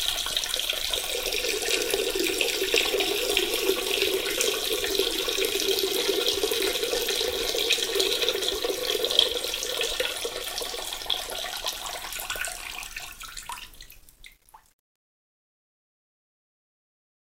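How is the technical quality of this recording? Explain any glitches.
The recording has one clear fault, on the closing fade. From 13.84 s to the end, during the fade-out that starts around 13.8 s, there is truncation distortion on the fade. The level stage drops to too few bits without dither, which fits a 10-bit path. From about 14.23 s onward, the quiet tail turns gritty instead of tapering cleanly.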